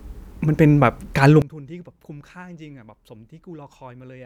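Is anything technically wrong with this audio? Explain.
Yes, there's a sudden gain jump at 1.42 s. The speech and the background noise both drop by about 23 dB in a single step and stay down to the end of the clip. There's no fade, just an instant change between one sample and the next. That's most likely a digital gain setting or bit shift applied without a ramp, so everything after that point sits far quieter than what came before.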